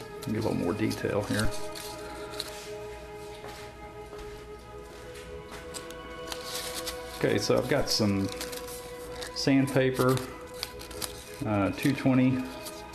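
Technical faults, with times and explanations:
4.52 s, dropped samples: one sharp click, likely from a sliver of audio well under a millisecond going missing, which makes the waveform jump abruptly to a later value.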